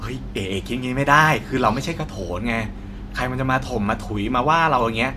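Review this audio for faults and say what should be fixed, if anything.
No faults turn up in this speech recording, so nothing needs to be fixed.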